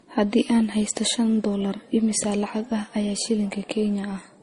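From start to finish, the speech has nothing above 10.6 kHz and carries layered, mismatched coding artefacts, likely from transcoding between lossy codecs in an MP3-Opus-MP3 chain.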